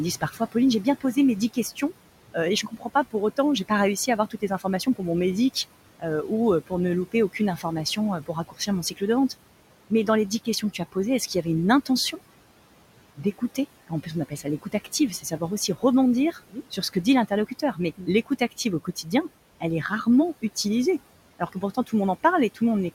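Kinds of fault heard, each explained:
Noise suppressor artifacts: The suppressor is running the whole way through, pulling down whatever bands it reads as steady background by about 18 dB, frame by frame. Since the room noise sits only about 17 dB under the speech, there's a fair bit for it to chew on, so you hear the noise dip away in the gaps and swell back under the talking.
Speech cut by the noise suppressor: In places the suppressor mistakes parts of the speech itself for noise and drops them along with the background, by up to about 17 dB at worst. It happens in five stretches: 0.21 to 5.01 s, 5.54 to 9.3 s, 9.9 to 12.19 s, 13.17 to 19.07 s, and 21.39 to 21.93 s, where the drop is shallower at about 12 dB. Within each stretch only brief bits are hit, from well under a second up to about a second in total, so quiet consonants and word endings sound swallowed or faint.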